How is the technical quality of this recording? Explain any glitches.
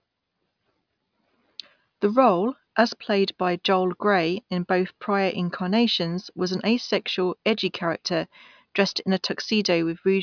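Nothing stood out on listening to this speech recording; there are no glitches to explain.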